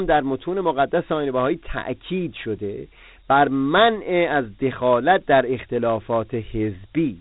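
Speech that carries Dialogic VOX ADPCM damage for its whole length. Nothing sounds above about 3.9 kHz, and a gritty hiss rides along with the speech and follows its level, which fits 4-bit OKI ADPCM at 8,000 samples a second, or 32 kbps. That moving grit sets it apart from plain telephone band-limiting or G.711 coding, where the band is just as narrow but the background stays smoother.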